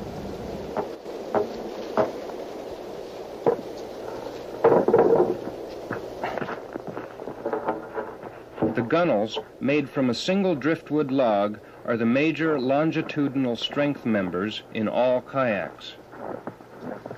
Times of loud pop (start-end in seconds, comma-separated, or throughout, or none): none